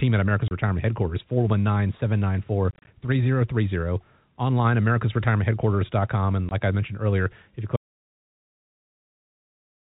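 Packets went missing on the way to the receiver, which put silence in their place, so this speech has packet loss filled with silence. At 0.48 s about 30 ms vanishes at once. From 2.71 to 2.87 s roughly 100 ms is lost in scattered pieces across 160 ms, none longer than 30 ms. At 6.49 s another 20 ms disappears. The gap sizes fit a 10 ms packet length. Each hole starts and stops abruptly.

At 7.76 s the input signal is lost and the recorder keeps writing silence until the end. A disconnected source or link is the likely cause. This audio dropout to silence is total: the speech stops mid-flow and even the room tone goes with it. Nothing after that point can be heard or recovered.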